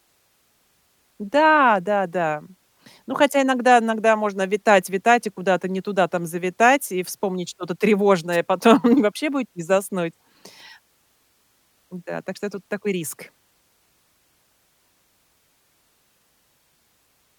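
A short swish of static cuts across this speech recording from 8.32 to 8.37 s. It is a wireless microphone noise hit: the FM radio signal momentarily faded as reflected paths cancelled, letting receiver noise rise.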